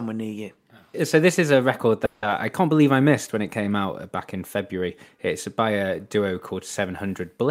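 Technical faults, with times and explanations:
2.05 to 2.24 s, call audio freeze: the last sound hangs as a fading buzz for 170 ms. Delayed packets likely emptied the jitter buffer. Speech resumes intact, 170 ms late.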